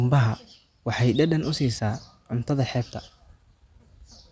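No technical faults can be heard anywhere in the recording. There is nothing in the audio that calls for a time or a value to be noted.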